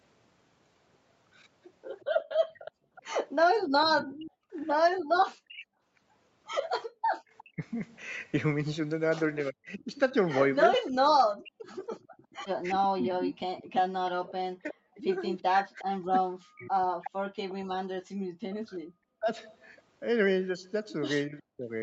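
Echo leak, from 2.0 to 7.43 s and again from 11.64 to 17.5 s, affects this speech recording: a faint second copy of the voice played on the far-end loudspeaker trails the original by 364 ms. It sits about 15 dB below the direct speech in the first stretch and about 20 dB below in the second. The likely cause is a loudspeaker on the far end whose echo canceller let part of the played-back call slip into its microphone and return down the line. Background gated by the echo canceller occurs between 2.72 and 6.89 s. The room tone ducks sharply, by as much as about 40 dB, in brief dips adding up to roughly half a second, then comes back. Those dips are the canceller clamping its microphone while its loudspeaker is active. Speech suppressed in double talk spans 3.05 to 21.63 s. Whenever both sides overlap, the far-end talker's voice sinks, dulls or breaks into fragments, with drops of around 40 dB and roughly five seconds affected altogether. 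This is likely the canceller failing to tell the live talker from the loudspeaker's echo and attenuating both together. Underneath all of this, nothing reaches above 8 kHz, which points to a wideband Opus call path at about 40 kbps.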